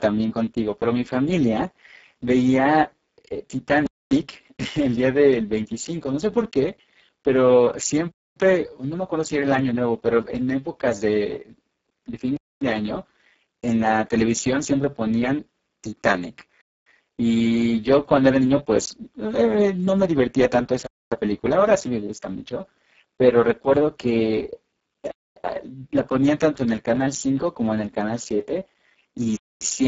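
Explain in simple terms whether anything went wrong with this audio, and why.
Speex codec, throughout: the speech sounds hoarse, noisy and somewhat robotic. This older voice-chat codec was squeezed to a very low quality setting, leaving too little detail to rebuild the voice faithfully, and nothing above about 7.6 kHz survives.

Gap between chunks, at 3.86, 8.11, 12.36, 16.61, 20.86, 25.11 and 29.36 s: each is a quarter-second hole. The audio arrived in four-second pieces, and silence was left at every join, so the sound stops and restarts on a steady rhythm.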